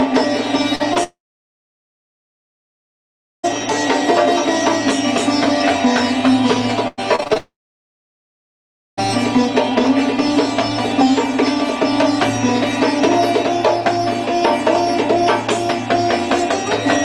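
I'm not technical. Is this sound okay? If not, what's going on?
No. The audio breaks up in several places.

Short concealed packet loss happens twice near the start, at 0.75 to 0.82 s and again at 0.94 to 0.97 s. A few hundredths of a second of sound never arrived in time. The receiver covered each hole by stretching the sound just before it, then blended back in. You hear a quick smear or wobble, and a tiny bit of sound may seem to vanish.

Long network dropout comes twice. The first runs from 1.03 to 3.45 s. The second runs from 7.38 to 8.99 s. The likely cause is the connection stalling so nothing got through. The last sound lingers briefly as a fading buzz or hiss. Then there is silence, about 2.3 s the first time and about 1.5 s the second. The sound returns later, but whatever was in the gap is gone.

Repeated packet loss (robotic sound) runs from 6.88 to 7.38 s, just before the second dropout. 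Small pieces kept going missing, one after another. Each gap was patched over, and the longest was about a tenth of a second. About 40 percent of that half-second is patched rather than real. So it sounds choppy, with bits cut out.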